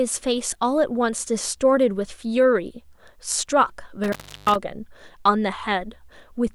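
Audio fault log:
4.04 to 4.56 s, intermittent contact: a loose plug or cable connection in the signal chain briefly lost contact, so the speech drops out for about 350 ms of that half-second stretch. The metal surfaces scraping as they separate and meet again put sharp crackle at both edges of the gap, and while the circuit hangs open the line carries only a faint hiss instead of the signal, which is why the cut sounds rough and ragged instead of clean.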